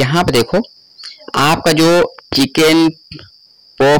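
Throughout, the signal is driven about 20 dB past what the stage can pass, so roughly a fifth of samples are cut flat: hard clipping, heard as harsh fuzz on every loud moment.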